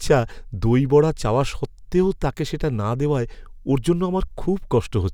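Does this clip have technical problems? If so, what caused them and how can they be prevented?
No, nothing in this speech recording stood out as a technical problem on listening, so there is no cause to trace and nothing to prevent.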